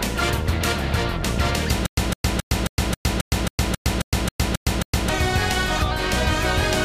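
From 1.86 s to 5.09 s the audio has a stutter with silent gaps. A 158 ms burst repeats 12 times, each followed by 112 ms of silence. The likely cause is a stalled stream replaying its last fragment. The audio for that span is lost.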